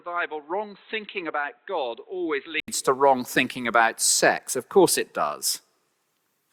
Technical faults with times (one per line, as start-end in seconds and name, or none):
0.00-2.68 input switched to a poorer device